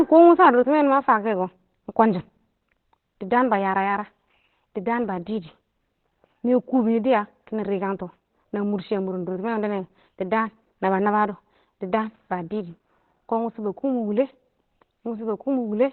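From start to end the speech sounds muffled and hoarse, with heavy damage and nothing above 4.2 kHz, likely Opus compression in its narrowband SILK speech mode at a rate near 12 kbps. A spectrogram shows a flat ceiling at 4.2 kHz with empty space above.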